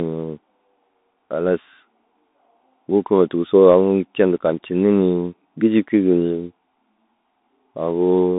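From start to finish the speech sounds thin and boxed in, with a granular hiss beneath it and scratchy, plainly audible grit on s sounds and louder bright passages. This is the Bluetooth CVSD headset codec: the band runs from about 200 Hz to 3.7 kHz with nothing above 3.8 kHz, and the one-bit up-or-down coding, consistent with a 64 kbps link, lets fast high-frequency swings outrun its adapting step size.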